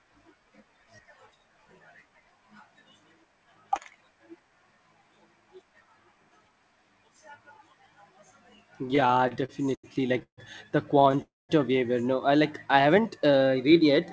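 Repeated stalls (stutter) run from 8.86 to 10.39 s. The receiver's jitter buffer kept draining because packets came in late or too slowly, and each time it stretched the last bit of speech to cover the wait. There are 16 such holds totalling about 417 ms, the longest 147 ms, and they fill roughly a quarter of that stretch. The speech drags and hiccups forward, though nothing is actually lost.

A second, lighter burst of repeated stalls (stutter) follows from 10.99 to 11.20 s: four brief holds adding 43 ms, none longer than 15 ms.

A call audio freeze comes immediately after, from 11.22 to 11.51 s, likely caused by packets being held up in transit until the buffer ran completely dry. The receiver carries the last sound on briefly, then about 210 ms of that 271 ms gap falls to silence. The speech resumes exactly where it paused, so everything after it arrives about 271 ms later.

A jitter buffer slow-down follows from 12.67 to 13.92 s. 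To rebuild its reserve, the receiver repeated single pitch cycles and slivers of pauses over and over, adding 130 ms. The speech plays at about 90% speed with its pitch unchanged, so sounds come out drawn-out. Throughout, the band stops at 8 kHz, which fits a 64 kbps G.722 call path.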